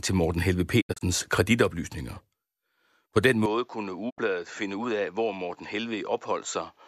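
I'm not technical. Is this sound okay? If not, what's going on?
No. Twice the speech cuts out. This is a digital broadcast dropout: the receiver lost the signal and went silent. From 0.80 to 1.03 s there are several quick holes. At 4.09 to 4.20 s there is one short gap.

From 3.46 s to the end, the voice turns duller, a little quieter and faintly hissier, with no pause. The likely cause is an input switched to a poorer device.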